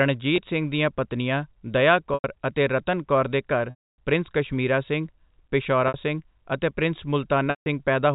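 Packet loss with pitch repetition breaks this speech clip at 0.36, 2.14, 3.7, 5.88 and 7.5 s, with gaps of 20, 100, 280, 60 and 160 ms. The receiver loops the last pitch period to fill each hole, so the 20 ms gap is a brief buzzy hold. The longer ones fade into silence before the speech cross-fades back in. Throughout, the band-limited telephone sound of G.711 coding can be heard.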